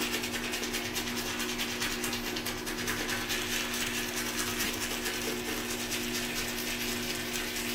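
A compressed frame arrived with flipped bits and the decoder played it regardless, giving a corrupt frame decoded at 1.29 to 1.32 s, a brief blip. The second, at 4.63 to 4.70 s, spans what sounds like several frames and forms a louder misplaced-frequency burst.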